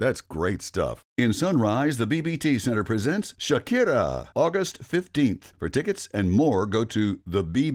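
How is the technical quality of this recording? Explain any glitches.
No glitches can be heard.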